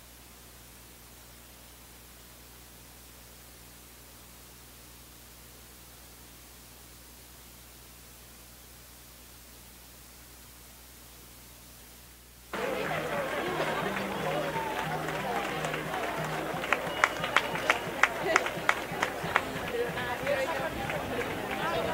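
Nothing goes wrong anywhere in this clip, so there's no fault to point to at any moment.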